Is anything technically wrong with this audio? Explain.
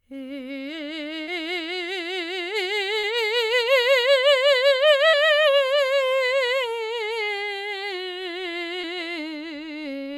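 Yes. Short concealed packet loss occurs at 1.23, 2.99, 5.09 and 8.81 s. About 40 ms of the music, or 20 ms at 8.81 s, arrived too late. The receiver extended the preceding sound to fill each gap, causing brief smears or wobbles.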